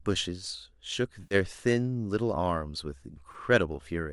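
The decoder twice loses AAC frames and covers the gap with concealment, rebuilding the missing stretch from the last good spectrum. From 1.23 to 1.35 s about 80 ms of the speech is lost, consistent with eight 10 ms low-delay frames, and the patch turns smeared and noisy. From 3.32 to 3.35 s a 20 ms loss leaves a brief phasey blur. Throughout, the light roughness of the low-delay AAC coding is likely from AAC-ELD at about 64 kbps.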